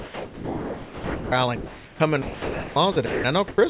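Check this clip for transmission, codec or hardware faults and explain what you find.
Two related faults, both traceable to the sender's voice-activity handling, run through the clip. Audio is band-limited with nothing above 4 kHz, which fits a narrowband G.711 call path.

Sound dropped by the voice detector occurs at 0.00–1.32 s, 2.22–2.76 s, 2.92–2.96 s and 3.06–3.24 s. The sender's voice detector likely misjudged quiet or trailing speech as background and stopped transmitting, so the receiver substituted comfort noise. Real sound vanishes under flat hiss: about 940 ms is lost in the first stretch, 340 ms in the second, and the whole 40 ms and 180 ms of the last two.

Comfort noise in place of the background appears at 1.56–2.00 s and 3.48–3.58 s. During pauses the sender likely switched to discontinuous transmission, and the receiver synthesised noise roughly matched to the background. 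The textured room noise gives way to a smooth, featureless hiss at nearly the same level, only about 1 dB different. The background sits about 20 to 24 dB below the loud passages, and the swap is mainly a change in character rather than level.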